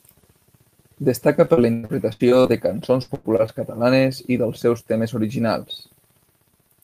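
Repeated packet loss drops pieces of speech from 1.45 to 2.51 s (eight gaps) and 3.03 to 3.50 s (four gaps), just before "catalanes i". Each gap, up to about 100 ms, is patched by stretching the previous sound, so the speech turns choppy and robotic.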